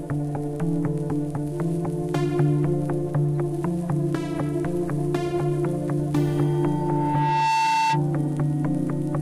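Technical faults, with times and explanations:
6.42 to 8.05 s, loudspeaker feedback squeal: a steady tone near 891 Hz rises out of the everyday sound, swelling over roughly a second and ending up a few decibels louder than the surrounding audio. A microphone is hearing the loudspeaker it drives, and at this one frequency the loop gain goes above unity, so each pass round the loop reinforces the tone until it is limited or the loop is broken, which happens at 8.05 s.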